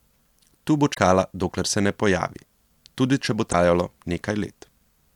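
Damaged data in a compressed stream at 0.90–0.98 s, just before "dokler se ne pojavi", and at 3.49–3.55 s, just after "pojavi tudi če bo": corrupted bytes make the decoder misread frames and lose sync while hunting for the next header, producing brief glitches in the speech.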